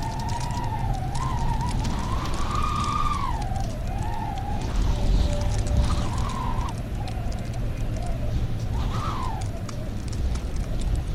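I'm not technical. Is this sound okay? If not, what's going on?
No. At 4.72 seconds there is a skip ahead: about a second of sound is dropped and playback jumps straight on, with no silent gap like a dropout would leave. From 6.15 to 8.81 seconds, and again from 10.00 to 11.10 seconds, a jitter buffer speed-up makes the sound run 3 to 4 percent fast to catch up. The pitch stays the same, unlike a sped-up recording.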